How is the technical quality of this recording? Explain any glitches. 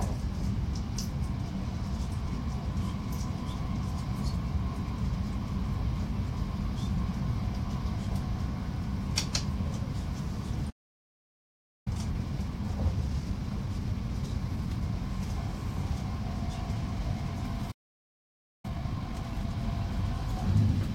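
The recording has two playback interruptions, each followed by a hurried recovery.

Playback stall at 10.70 to 11.88 s and again at 17.71 to 18.65 s: the sound cuts to silence for about 1.2 s, then 0.9 s, most likely because the player ran out of data or was blocked.

Time-compressed catch-up from 11.88 to 14.88 s at 1.1 times speed, and from 18.65 to 19.57 s at 2 times: small pieces are cut and cross-faded to clear the backlog, so the audio rushes at unchanged pitch.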